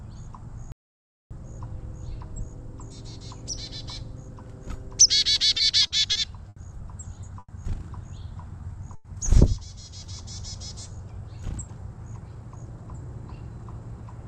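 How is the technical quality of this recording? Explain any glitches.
The recording has a string of network and capture glitches, six in all, spread across the clip.

From 0.72 to 1.31 s there's an audio dropout to silence: the sound cuts out to silence with no room tone, and about 0.59 s is simply gone. The input was likely lost for a moment (a disconnect, a link failure or a stray mute) while the recorder kept writing silence.

Between 5.57 and 6.58 s you get repeated stalls, a stutter: four short gaps, the longest 70 ms, adding up to 150 ms of filler. Packets kept arriving late, the jitter buffer ran dry each time, and the receiver held the last sound until data resumed. Nothing's missing, but it drags and hiccups.

At 7.39 to 7.50 s there's a short stall from a late packet. One packet missed its slot, so about 90 ms of the preceding sound gets stretched, giving a brief held moment with a slight buzz or dip before the audio picks up exactly where it left off.

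From 8.41 to 8.69 s the jitter buffer slow-down kicks in. The receiver padded in about 43 ms by repeating tiny pitch-period chunks to rebuild its reserve, so the sound runs at roughly 88% speed with the pitch unchanged, a bit drawn out.

Right after, at 8.95 to 9.07 s, you hear a call audio freeze: the last sound is carried on as a fading buzz or hiss for about 100 ms, then resumes without losing anything. The likely cause is packets held up in transit, emptying the buffer.

Finally, 12.13 to 13.82 s is a jitter buffer speed-up. After a backlog built up, the receiver trimmed roughly a fifth of a second in small pitch-period slices, so the audio runs at about 113% speed with the pitch unchanged and sounds a little rushed.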